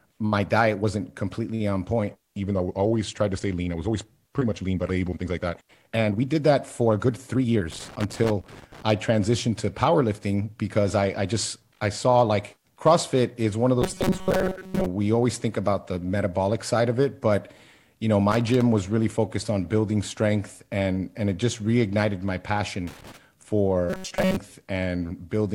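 At 7.71 to 8.82 s there's a burst of loose connector crackle, an irregular scratchy crackling over the speech for about a second. It comes back briefly from 18.31 to 18.62 s, between "it but you know" and "was really focused on", and again from 22.87 to 23.17 s, right after "it just reignited my". That's a worn or dirty contact making and breaking as it shifts, chopping the signal.

Between 13.82 and 14.86 s, after "is one of" and before "we always think about", the speech turns into a rigid, metallic robotic sound from repeated short buffers, with a fixed buzz at 188 Hz that still loosely tracks the words. The likely cause is audio arriving too slowly, so the playback keeps repeating tiny chunks, which fits a buffer of roughly 5 ms, while most of the real material gets skipped. The same buzz returns from 23.90 to 24.36 s.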